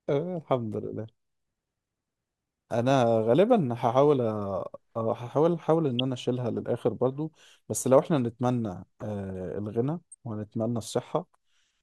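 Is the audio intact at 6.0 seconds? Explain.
No. A corrupt frame decoded at 5.99 s: flipped bits in a couple of compressed frames were played anyway, misplacing energy into a brief chirp, squeak, blip or burst of noise peaking around -15 dBFS.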